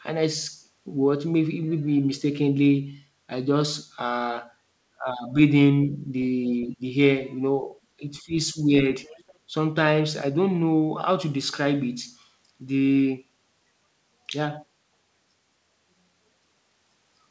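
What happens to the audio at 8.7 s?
Speech suppressed in double talk runs from 8.53 to 8.73 s. The speech dips by about 10 dB in pieces over roughly 150 ms. The likely cause is an echo canceller that could not tell the talker from loudspeaker echo while both sides spoke, so it attenuated both.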